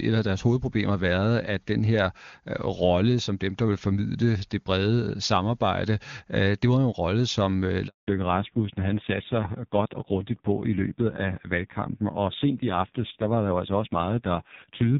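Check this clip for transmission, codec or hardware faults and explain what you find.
Two faults come together just after the midpoint: a short dropout followed by a lasting loss of bandwidth.

Handover gap, 7.87 to 8.07 s, right after "en rolle som øh": the call switched networks and no speech frames arrived for about 200 ms. The sound fades within tens of milliseconds into true silence. Packet-loss concealment would smear or repeat sound instead.

Fallback to narrowband, 8.07 s to the end: once the new link starts, nothing above 4 kHz remains, and the sound turns dull and rasping. That roughness points to a drop from the clear HD Voice heard earlier to a low-rate narrowband codec around 5.9 kbit/s. A plain low-pass filter would remove the same band without adding that coding grit.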